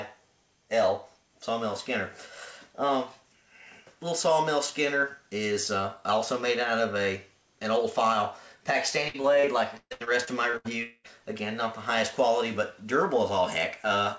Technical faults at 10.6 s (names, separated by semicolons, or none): repeated packet loss (robotic sound)